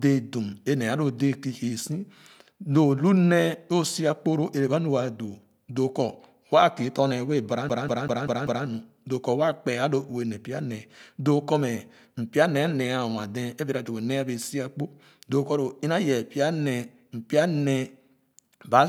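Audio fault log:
7.69 to 8.67 s, CD stuck on one turn: a scratch kept throwing the laser back to the same track position on each revolution, so one 195 ms slice of the speech replays five times in a row, with a brief mute at every jump back. The result is a fast, perfectly even stutter, a machine-regular rhythm of about five repeats per second, that freezes the speech until playback breaks free just before "nu doo".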